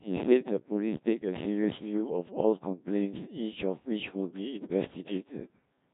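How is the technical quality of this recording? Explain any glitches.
The technical quality is poor: the whole clip has passed through a very low-rate speech codec. Throughout, a Codec 2 vocoder is audible. It sends only pitch, voicing, energy and a coarse spectral envelope, and the decoder rebuilds speech from sine waves rather than the original waveform. The heavy damage here fits roughly the 1.3 kbit/s mode, leaving the speech robotic, buzzy and synthetic-sounding.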